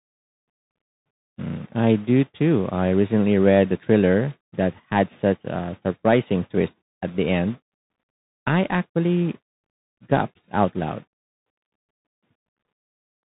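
From start to finish the speech passes through a Bluetooth CVSD headset codec. The band stops at 4 kHz, so everything sounds narrow and boxed in. The coder sends one bit per sample, only up or down, with an adapting step. Loud, bright moments outrun that step and distort. S sounds turn scratchy. A granular hiss sits under the speech throughout. The damage is plainly audible, and the sound fits a 64 kbps CVSD link.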